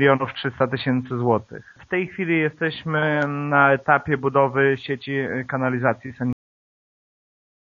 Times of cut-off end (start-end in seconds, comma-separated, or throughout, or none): 6.33-7.61